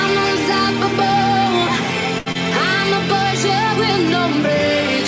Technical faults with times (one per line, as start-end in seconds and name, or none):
2.18-2.28 short stall from a late packet
2.32-2.37 short concealed packet loss